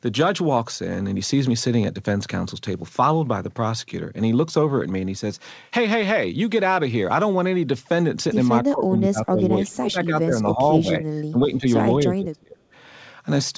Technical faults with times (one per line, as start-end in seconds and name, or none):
8.67-11.65 speech suppressed in double talk
12.07-12.61 speech suppressed in double talk